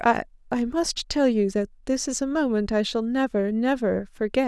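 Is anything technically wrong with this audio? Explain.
No, nothing technically wrong can be heard here.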